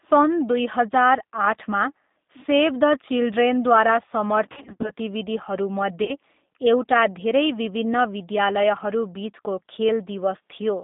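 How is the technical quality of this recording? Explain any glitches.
The recording is narrowband and codec-coloured throughout, with two dropouts.

The G.729 codec shapes the whole clip. It rebuilds the speech from a vocal-tract filter, a pitch predictor and a few pulses per frame, which fits an 8 kbit/s stream. The voice stays intelligible but sounds rough and slightly synthetic. A spectrogram shows energy confined to about 200 Hz to 3.7 kHz, with nothing above.

VoIP packet loss concealed by the speech codec occurs from 4.52 to 4.91 s, where about 190 ms of audio is missing in runs of up to 50 ms, and again from 6.04 to 6.16 s, a 40 ms gap. Each time, the decoder stretches its last pitch and filter at falling gain. This produces a buzzy or noisy, fading smear instead of clean silence, and the voice stays weak briefly afterward. On the spectrogram, harmonics appear frozen and flat. The waveform shows a decaying, repetitive envelope.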